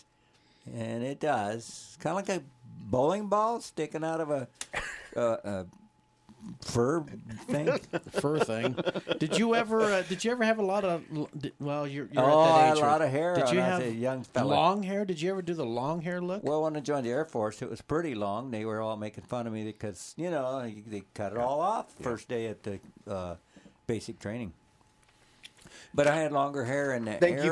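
Nothing stood out as a technical fault anywhere in the audio on listening.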